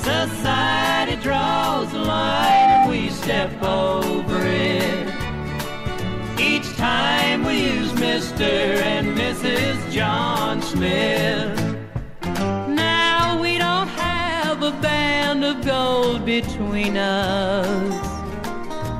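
At 2.27 s a loudspeaker feedback squeal starts. A single tone near 787 Hz rises out of the sound. It takes about a third of a second to swell. It then sits roughly 10 dB above everything else. A microphone was picking up the loudspeaker it fed. At that one frequency the loop gave back more than it took in, so the tone fed on itself. The squeal stops at 2.93 s.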